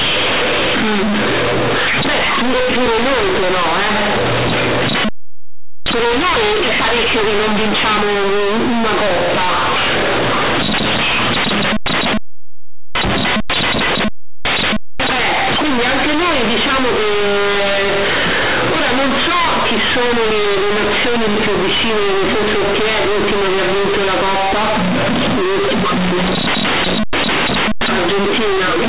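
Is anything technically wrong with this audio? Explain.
Yes. Companded audio read as linear runs through the whole clip. The speech was stored as A-law bytes but is played back as plain 8-bit samples, without expansion. Every sign change jumps across half the range. Quiet parts become as loud as loud ones. The result is a harsh, buzzy, very loud distortion, with heavy noise filling the pauses. The underlying telephone band, consistent with G.711 A-law coding, still caps the sound below 4 kHz.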